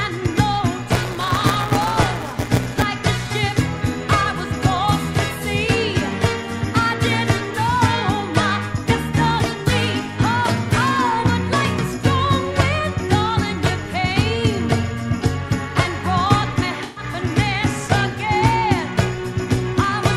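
From 0.92 to 2.83 s there is buffer tearing. The writing program and the playback hardware have drifted out of step, so they cross inside every period. A small slice of each buffer, around a sixth, replays audio from about 20 ms earlier. Hard joins sit on both sides of that slice. The result is a steady rattling buzz at 172 Hz, which fits a 256-sample buffer. It is heard only while sound is present.

At 16.83 s comes AAC frame loss with concealment, running to 17.04 s. About 128 ms of coded audio went missing, which points to a run of roughly six frames. The decoder filled the gap by extending the last good spectrum with scrambled detail. The loss is short, so the sound never drops to silence. Instead it turns briefly smeared and noisy, with a hollow, phasey colour.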